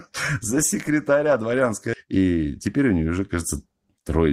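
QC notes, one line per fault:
1.93 to 2.06 s, skip ahead: right after "за секретаря дворянской" the speech jumps forward with basically no gap. Roughly 0.7 s of audio got dropped, likely a jitter buffer overflowing with later packets queued, so the two sides butt together almost directly.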